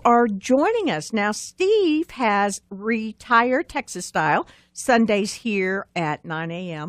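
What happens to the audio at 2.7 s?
Nothing goes wrong at 2.7 s; the speech runs through that moment intact, with no dropout, click, distortion or other fault.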